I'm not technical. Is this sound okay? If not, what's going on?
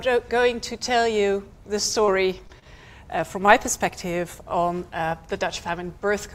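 No, there are three brief glitches packed close together, a little after the two-second mark.

At 2.06 to 2.09 s and again at 2.47 to 2.51 s, the sound smears or wobbles for an instant, and a tiny sliver seems to drop out. This is short concealed packet loss: about 20 milliseconds of audio never arrived in time, so the receiver invented a stand-in by carrying the previous sound forward for 15 to 18 milliseconds and then blending back into the real signal. Anything very short in that gap can simply disappear.

Just after, at 2.59 to 2.64 s, one moment is held slightly too long, with a faint buzz or dip. This is a short stall from a late packet: a piece of audio showed up late, so the receiver stretched the last sound by about 32 milliseconds while it waited, then carried on from where it left off. Nothing is lost here. The timing just hiccups.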